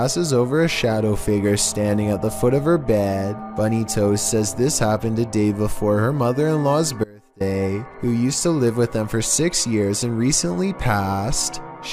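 At 7.04 s the sound drops out abruptly, returning at 7.40 s. This is an audio dropout to a faint residue, lasting about 360 ms. The gap is not silent. A faint leak of the sound remains, roughly 25 dB down. The likely cause is a brief signal loss with the downstream path still live.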